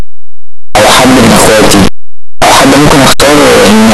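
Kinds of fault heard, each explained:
Signed and unsigned mixed up: The speech comes through very loud, harsh distortion throughout. Soft sounds come out as loud as strong ones. The likely cause is 8-bit samples read with the wrong sign, which flips the top bit so every zero crossing jumps across the full range.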